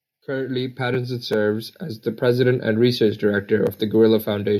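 Automatic gain rising from 0.25 s to 3.56 s: the gain control judged the incoming speech too quiet and raised its level by about 10 dB over those three seconds, so voice and background noise swell together in one slow, steady climb.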